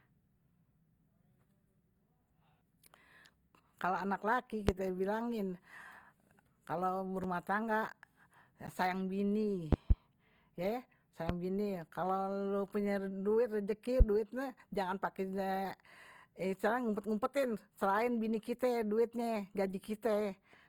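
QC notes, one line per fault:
Throughout: Opus compression. The encoder, likely Opus in its CELT music mode at a low rate around 24 kbps, refills starved bands by folding or noise, so the speech sounds rough and grainy. Bandwidth stays full, reaching about 20.3 kHz.
4.69–4.72 s, 9.73–9.94 s, 11.29–11.33 s, 14.00–14.03 s: loud pop. A sudden voltage step or pulse, likely a plug, switch or driver glitch, hits the signal and peaks roughly 20 to 25 dB above the speech. Each is a single sharp pop, except the double pop at 9.73–9.94 s.
7.24 s and 8.67 s: block of digital silence. The output buffer likely wasn't filled in time, so the sound cuts out and back with no fade. Both gaps are under 15 ms, so each is heard as a tick or dip rather than silence. The holes, about 5.3 ms and 10.7 ms, fit 256- and 512-sample buffers.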